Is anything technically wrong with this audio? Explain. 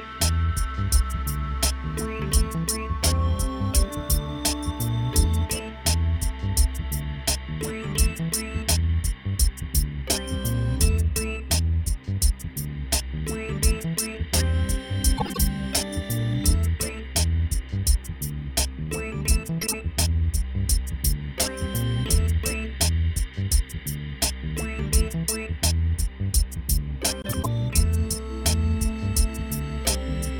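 Yes. Frames out of order occur at 15.17, 19.61 and 27.22 s. Two neighbouring runs swap places, so each short stretch plays halves exchanged: a brief garbled flutter, no time lost.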